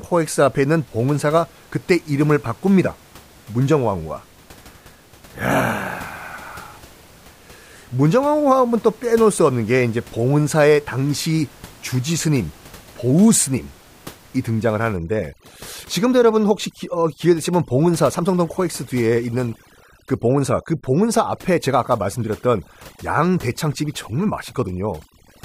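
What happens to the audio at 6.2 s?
Nothing goes wrong at 6.2 s; the speech carries on intact, with only the room noise sitting about 26 dB below it.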